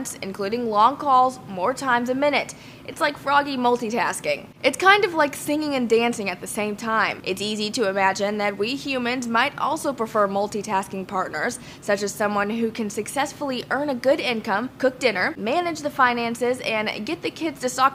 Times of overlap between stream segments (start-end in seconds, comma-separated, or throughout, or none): none